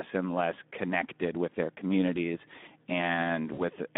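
A Speex codec runs through the whole clip. At a low bit budget, its CELP encoder has too few bits to describe the excitation, so the speech comes out hoarse and noisy, with a clearly audible coded graininess. The damage fits a rate of about 11 kbps. The audio is confined to a narrow line band of roughly 200 Hz to 3.6 kHz, giving a thin, telephone-like sound with no content above it.

From 3.53 to 3.61 s there is VoIP packet loss concealed by the speech codec. About 40 ms of data went missing, which fits two 20 ms frames. The decoder filled the gap by extending the last pitch and filter with falling gain, so the speech is stretched into a fading sound. Because each decoded frame depends on the previous one, the sound stays weak or distorted for tens of milliseconds or more after the loss ends at around 3.61 s.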